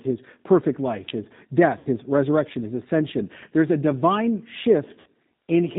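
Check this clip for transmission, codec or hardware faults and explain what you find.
Two kinds of fault are present: a low-rate speech codec across the whole clip, and two concealed packet losses.

The G.729 codec runs throughout. The sound points to G.729A at 8 kbit/s. This codec models the voice as a vocal tract filter driven by a pitch predictor and a few sparse pulses per short frame. Nothing above 4 kHz survives. The damage is plainly audible here. The speech sounds dull and band-limited, with a rough, slightly synthetic edge.

VoIP packet loss concealed by the speech codec occurs twice, from 1.79 to 1.87 s and from 5.00 to 5.07 s. About 60 ms of audio goes missing each time, which fits two lost packets. The decoder fills each gap by repeating its last pitch and filter at falling gain. Each gap comes out as a short, fading smear of stretched tone or coloured noise. Because each frame builds on the previous one, the speech stays weak or distorted briefly after each loss.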